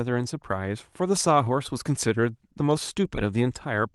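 The speech comes through a call path whose coding leaves the expected texture and a top end that stops around 12 kHz, consistent with a super-wideband call codec at a moderate bitrate, and nothing in the signal departs from that normal behaviour.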